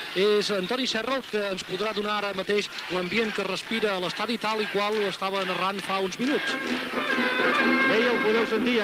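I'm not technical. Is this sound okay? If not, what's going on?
No. From 0.84 to 4.81 s there's a call bitrate drop: the connection suddenly offered less room, so the sound was squeezed into far less data. It turns rougher and more muffled, worst for about two and a half seconds, then recovers.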